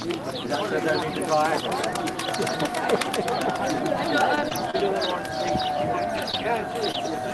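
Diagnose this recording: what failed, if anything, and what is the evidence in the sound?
Packet loss on the network leg of the call path shows up as scattered short gaps from 4.35 to 6.96 s. There are about five, none longer than roughly 30 ms. The receiver filled each one by continuing the last sound, which leaves brief ticks and smears.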